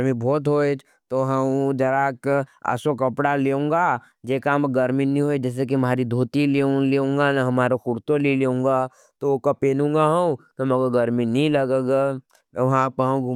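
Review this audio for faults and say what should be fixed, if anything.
No faults turn up in this audio, so nothing should be fixed.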